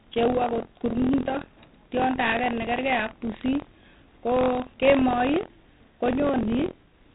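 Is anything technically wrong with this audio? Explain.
Yes, two faults run through the whole speech clip.

Buffer tearing is present from start to finish. The writing program and the playback hardware have drifted so they cross inside every buffer period, leaving a small slice of each buffer holding audio from about 50 ms earlier, with hard joins on both sides. That produces a robotic rattle at 43.1 Hz, which fits a 1024-sample buffer. Unlike a steady mains hum at a similar low pitch, it appears only while sound is playing and drops out in the gaps.

4-bit ADPCM compression also affects the entire clip, heavily. Each sample is coded as a coarse 4-bit step from a prediction, with an adaptive step size. The result is gritty hiss riding on every loud syllable and smearing on sharp onsets where the step size lags. Nothing remains above 3.9 kHz, so the sound is dull, consistent with a rate around 32 kbps. 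Unlike perceptual codecs, there's no swirling or warbling, just level-following grit.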